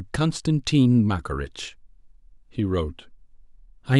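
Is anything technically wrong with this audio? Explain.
No, nothing technically wrong can be heard in this speech recording. There is no fault to point to at any moment in the clip.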